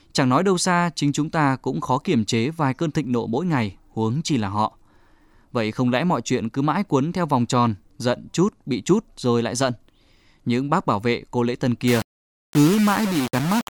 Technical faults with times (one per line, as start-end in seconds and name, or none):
11.88-13.70 low bit depth without dither